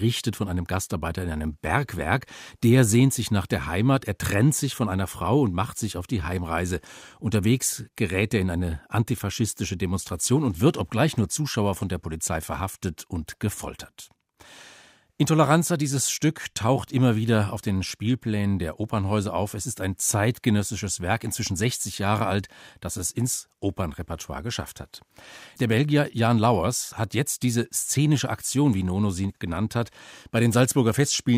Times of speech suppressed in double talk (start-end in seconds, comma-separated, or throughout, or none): none